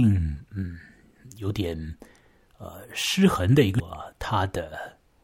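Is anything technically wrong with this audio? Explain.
Yes. At 3.79 s the speech has damaged data in a compressed stream. Corrupted bytes make the decoder misread the frames there and lose sync until it locks onto the next valid frame header, producing a brief glitch that interrupts the speech.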